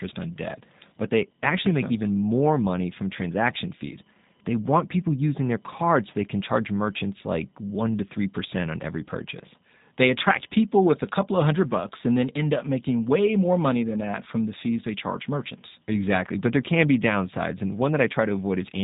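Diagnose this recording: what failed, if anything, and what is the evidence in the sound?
Codec stage: G.729 coding runs through the whole recording. Nothing passes above 3.8 kHz, so a spectrogram shows an empty band over that line, and the speech sounds plainly rough and synthetic, which fits an 8 kbit/s model that rebuilds each 10 ms frame from a filter, pitch predictor and sparse pulses.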